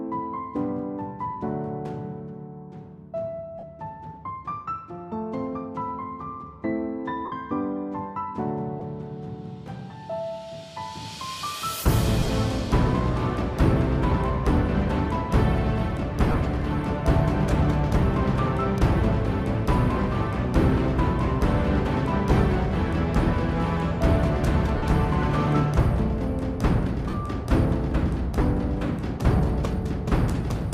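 Lost LE Audio frames at 3.59, 7.25, 8.79, 12.19, 16.30, 24.78, 27.10 and 29.37 s, each 15 to 68 ms. The decoder repeats the last spectrum with scrambled phase. Tones smear into brief noisy patches.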